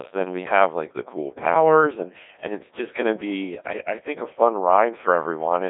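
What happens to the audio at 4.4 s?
At 4.4 s, as throughout, the Codec 2 vocoder resynthesises speech from pitch and envelope data, roughly a 1.6 kbit/s mode, leaving buzzy, robotic sound confined to 250 Hz–3.7 kHz.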